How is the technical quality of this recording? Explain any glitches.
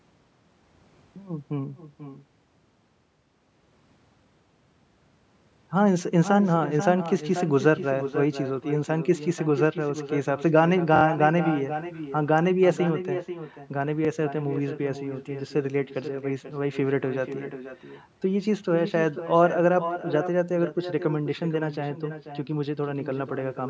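The recording has two problems: an echo of the speech runs through the whole clip, and playback stutters twice.

Echo with no canceller: the far end's loudspeaker fed back into its microphone, and nothing removed it. From start to finish, each phrase returns around half a second later as a quieter copy, about 10 dB down, sounding thinner than the original.

Repeated buffer: new audio missed its deadline, so the device replayed its last block. From 10.96 to 11.03 s, one piece about 23 ms long plays three extra times, and from 14.05 to 14.07 s another plays once more. Each repeat has a hard join. The length fits a 1024-sample buffer, and the result is a short stutter.

The content stops at 8 kHz, which fits the call's normal microphone processing and is not a fault.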